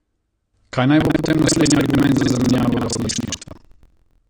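Throughout, the speech sounds dull and smeared. The likely cause is heavy AAC compression, which fits 32 kbps AAC-LC. From 0.98 s to the end, buffer tearing sets in. Writer and reader cross inside each buffer, splicing in audio from about a fifth of a second earlier. It gives a rattling 21.5 Hz buzz, which fits a 2048-sample buffer.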